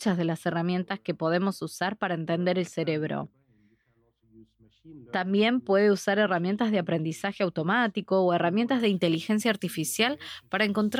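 A speech recording with pre-emphasis left on from 8.8 s to the end. The treble was lifted for transmission, and the matching de-emphasis cut never followed. High frequencies sit about 14 dB above the 1 kHz level at 10 kHz, a rise that fits the 75 µs FM curve. The result is thin and overly bright. Sibilants hiss and spit. The low and middle ranges sound weak beside the exaggerated top end.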